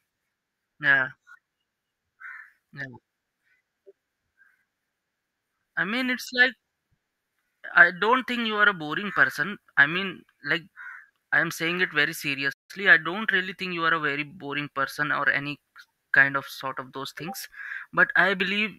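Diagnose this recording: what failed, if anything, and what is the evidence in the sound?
A playback stall cuts the speech to silence from 12.52 to 12.71 s, a gap of about 163 ms between "am saying it very" and "I don't really think". The cause is likely the player's buffer running dry or its output thread blocking until it recovered.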